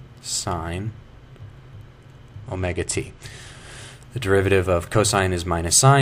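A Bluetooth SBC bit pool drop hits the audio from 2.43 s to 3.92 s: the link came under congestion and the sending device cut the encoder's bit budget, and the sound fits a fall from a bit pool of around 31 to about 13, near 94 kbps. Starved of bits, the highest sub-bands lose their allocation and the remaining ones are quantised coarsely, so for that stretch the treble goes dull and a gritty noise rides on the sound until the rate recovers.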